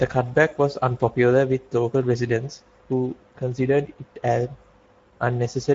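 Speech runs through the Speex codec for the whole clip, with plainly audible hoarse, noisy coding damage, which fits a bitrate around 17 kbps. A spectrogram shows a hard ceiling at 7.7 kHz, with smeared, noise-like texture above 4 kHz instead of harmonic detail.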